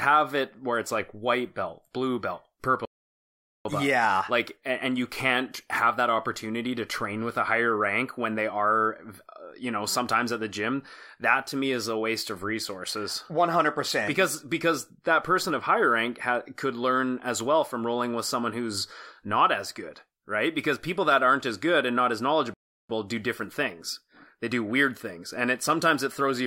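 Speech, with two playback stalls where the output just drops to silence mid-flow and then picks up again. The first comes right after "blue belt", from 2.85 to 3.65 s, a gap of about 0.8 s. The second runs from 22.54 to 22.89 s, roughly 0.36 s, between "good and not as" and "do different things". The likely cause is the player running dry on buffered data or its thread getting blocked until it recovered.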